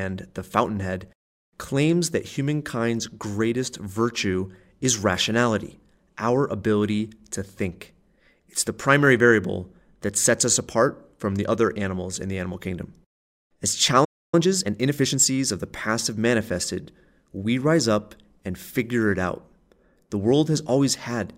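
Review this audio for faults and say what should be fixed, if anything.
At 14.04 s the speech cuts out mid-flow and stays silent until 14.34 s, a playback stall of about 0.28 s. It most likely happened because the player ran out of buffered data or its thread was blocked. The waveform drops to a flat line there, and the spectrogram shows an empty vertical band. A deeper playback buffer and an audio thread that never waits on other work would prevent it.

From 14.34 s to 15.46 s, leading into "of the past have", time-compressed catch-up hurries the speech to about 1.25 times normal speed at unchanged pitch. The player cuts and cross-fades small slices to clear its backlog. On the spectrogram the harmonics keep their frequencies while syllables crowd together, with slight smears at the splices. Avoiding the stall removes the need for catch-up.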